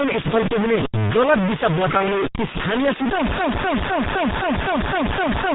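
The clip is speech, and it is heavily damaged throughout. A hard, grainy distortion rides on every sound. It changes with the speech and follows its level. Quiet stretches break up and sputter instead of fading smoothly. The grit is about as loud as the speech itself. This is likely low bit depth without dither, with the signal truncated to very few steps. The sound fits about 3 bits. The speech is also muffled and hoarse. Nothing is heard above 4 kHz. Consonants smear together, and the voice colour lags behind quick changes. That is the sound of the G.723.1 codec, an old low-rate telephony codec working in 30 ms frames. The heavy damage here fits a rate near 6.3 kbit/s. From 1.97 to 2.11 s, right after "पुग्ने गलत दिशा", there is VoIP packet loss concealed by the speech codec. About 30 ms of audio is missing, which points to a single lost frame. The decoder fills the gap by stretching the last sound into a buzzy tone or a coloured noise that fades. 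The speech stays weak and distorted for roughly a tenth of a second more while the codec recovers. From 3.38 s to the end, the audio becomes a broken-record loop. A fragment of about 0.26 s repeats exactly, back to back, eight times. The speech that should follow is gone. The repetition sounds like a stalled player or stream resending the last piece it held.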